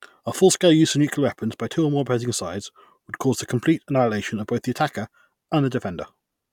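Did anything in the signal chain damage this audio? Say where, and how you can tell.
No, nothing in the signal chain audibly damaged this speech, and no stage from capture through playback left any audible trace on the signal.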